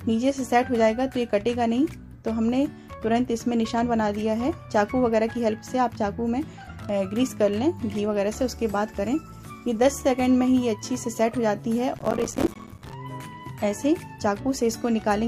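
Processor overload crackle runs from 11.98 to 12.92 s. The processor repeatedly fails to finish its small buffers, which seem to be around 5 ms each, in time. Dozens of them drop out as hard-edged gaps of silence, producing a gritty burst of crackle over the audio.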